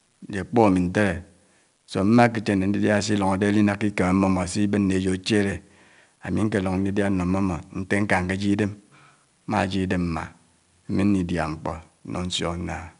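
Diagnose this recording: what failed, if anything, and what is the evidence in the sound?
The codec stage failed: 4-bit ADPCM compression runs through the speech clip. A gritty hiss rides on every loud syllable. Each sample is stored as a coarse 4-bit step from a prediction. Nothing sounds above 10.6 kHz, which fits an 88 kbps stream.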